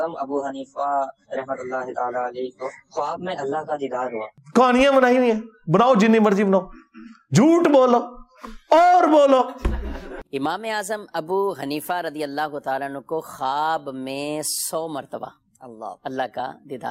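At 9.07 s there is a single sharp click, a thin vertical line across the spectrum. Its likely cause is dropped samples: a couple of samples, a tiny fraction of a millisecond, missing from the stream, so the waveform jumps straight to a later value. No sound is lost or audibly shortened, which sets it apart from a dropout, where a stretch of audio disappears and leaves a gap.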